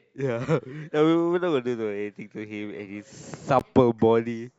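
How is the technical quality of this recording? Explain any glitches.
The speech has one glitch: a brief dropout at 3.59 s, caused by a gap between stream segments. The timestamps of two consecutive segments, which fits segments about 2 seconds long, fail to meet, and the player fills the 16 ms hole with silence. The result is a short, hard-edged cut in the sound, though no audio content is actually lost.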